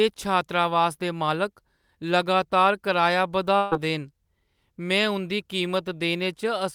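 At about 3.57 s there's a burst of packet loss, running to 3.73 s. Roughly 140 ms of speech never arrived, so the receiver stretched the last sound and let it fade, giving a brief held buzz or hiss before the talk picks up further along.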